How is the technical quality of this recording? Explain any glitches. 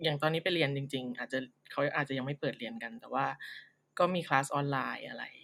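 Listening through the recording, nothing stood out as a technical problem or glitch.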